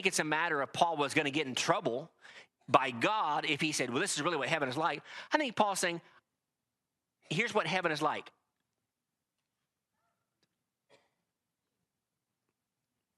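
Listening through the speech recording, nothing stood out as a technical fault at any point.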